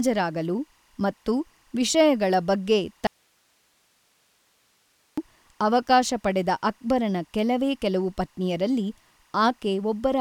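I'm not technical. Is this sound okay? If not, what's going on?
No, there are two problems. Running under the whole recording is timecode bleed: a faint, steady chirping warble, flipping between pitches around 1 and 2 kHz. That's the sync signal from a neighbouring cable or track leaking into the speech.

Then there's an audio dropout to a faint residue from 3.07 to 5.18 s, just after "ಮತ್ತು ವಿಷಯಗಳ ಬಗ್ಗೆ". The voice vanishes abruptly for about 2.1 seconds, leaving only hiss, then returns at "ಅವಕಾಶ ಪಡೆದ ಅಕ್ಬರನ ಕೆಲವೇ". The likely cause is a break in the signal feed.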